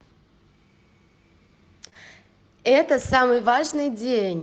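At 1.85 to 1.87 s, a lost packet rebuilt from error correction. A packet went missing, and the next one carried a rough low-bitrate copy. The decoder played that copy, so nothing drops out. The speech turns briefly grainier and noisier.

Right after, two short concealed packet losses run back to back, from 1.89 to 1.93 s and from 1.93 to 1.97 s. Each gap is about 20 ms. The receiver never got that audio in time. It stretched the preceding sound to cover each hole, then blended back in. This gives a quick smear or wobble.

From 3.33 to 3.83 s comes a longer lost packet rebuilt from error correction. It points to 13 separate losses, about a quarter second of rebuilt audio in total. There is no gap. The speech sounds rougher and noisier where those rebuilt frames fall within that half second. The Opus call path's 8 kHz bandwidth stays constant across all of this.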